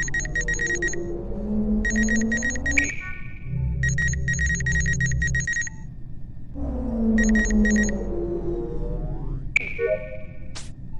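Nothing in the recording stands out as a technical fault at any point, so there's nothing to walk through in time order here.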